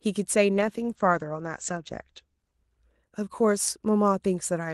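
Speech carried over an Opus call path, with a call bitrate drop from 0.55 s to 3.33 s. Partway through, the coding turns coarse and watery, holding at its roughest for about 1.7 s, which points to the encoder being pushed from around 32 kbps down to around 12 kbps. On a spectrogram, the energy that normally reaches 12 kHz is cut off flat at 8 kHz across that span, with smeared, blotchy detail below it, before the full band returns.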